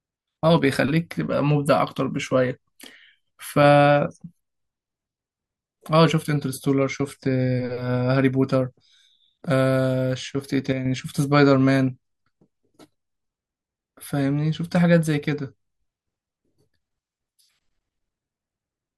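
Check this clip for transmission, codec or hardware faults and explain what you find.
Two short level dips in the speech point to one channel dropping out, likely a momentary loss of one side of the stereo feed before it was folded to mono. It happens from 0.58 to 0.63 s and again from 10.73 to 10.86 s. With one channel gone, only half of what both sides shared reaches the mono sum, so the speech falls abruptly by about 6 dB, sounding quieter, then snaps back when the channel returns.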